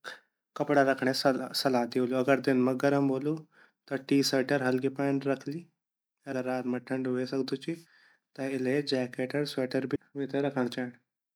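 Compressed frames are skipped at 6.31 s, 7.85 s and 9.94 to 9.96 s. Each time the decoder loses several whole frames and the speech leaps ahead, roughly 150 ms at the first two and 200 ms at the third, consistent with frames of about 26 ms. Unlike a dropout, no silence is left behind. Unlike a sample-level splice, the overlapping frames smear each join into a soft blip instead of a sharp click.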